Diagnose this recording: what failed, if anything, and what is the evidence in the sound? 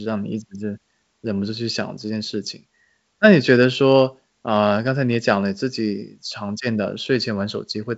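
Nothing has failed; no fault is audible.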